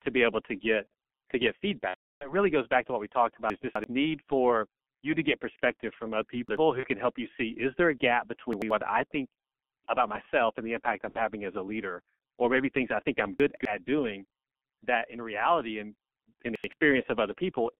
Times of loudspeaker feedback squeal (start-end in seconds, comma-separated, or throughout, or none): none